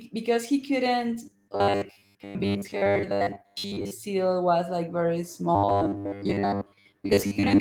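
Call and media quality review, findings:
Robotic sound from repeated short buffers, 1.26 to 3.93 s, after "because he couldn't", ending before "was like very". Speech collapses into a rigid metallic buzz near 100 Hz, following the original only roughly. Likely audio arriving too seldom, so playout loops a roughly 10 ms buffer.

Same fault, 5.55 to 7.60 s, after "was like very", running to the end. Identical 100 Hz buzz. Most of the real audio is likely skipped while the repeats fill in. Opus fullband hybrid at 20 kbps sits underneath.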